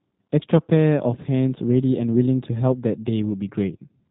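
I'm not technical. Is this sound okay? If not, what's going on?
No. The whole clip has passed through the G.729 codec, a phone-call compression method that squeezes speech down to very little data. It doesn't send the sound itself. It sends a rough recipe for rebuilding the speech, and the rebuilt speech comes out plainly rough and slightly artificial. Everything above about 3.8 kHz is gone, so the speech sounds muffled and boxy, like an old phone line. The words stay understandable from start to finish.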